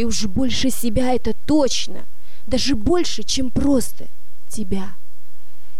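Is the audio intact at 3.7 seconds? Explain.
Yes, at 3.7 seconds the audio plays through cleanly with no audible dropout, glitch, distortion or other fault.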